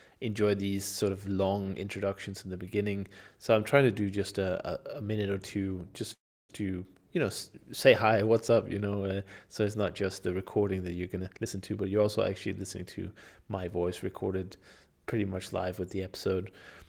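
Speech, with two faults in the call audio. From 6.13 to 6.51 s there is a call audio freeze: the sound trails off briefly and then goes silent for about 320 ms. The likely cause is packets held up in transit so that the jitter buffer ran dry. Unlike a packet-loss dropout, nothing is missing afterwards. The speech resumes exactly where it stopped, so the 0.36 s gap is inserted time that adds delay, not lost audio. From 11.18 to 13.65 s comes a jitter buffer speed-up, with the speech playing at about 114% of normal rate and sounding hurried. The receiver is trimming short pitch-period slices, around 0.4 s in total, to shrink an overfilled buffer. What separates this from a resampling or tape-speed error is that the pitch stays where it was and only the pace increases.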